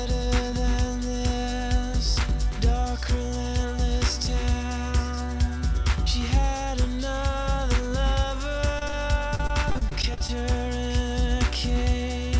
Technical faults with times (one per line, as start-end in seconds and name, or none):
8.79-8.93 short concealed packet loss
9.35-10.29 repeated packet loss (robotic sound)